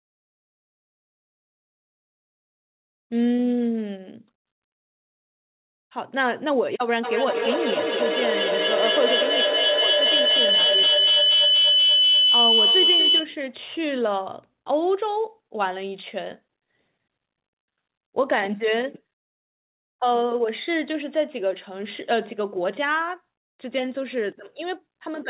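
Speech clip carried over a call link, with nothing above 4 kHz. From 7.02 to 13.39 s a feedback howl builds. Two devices share a room, so each pass through microphone and loudspeaker comes back louder. It settles near 3 kHz, with the loop repeating roughly every fifth of a second, and peaks about 4 dB above the speech.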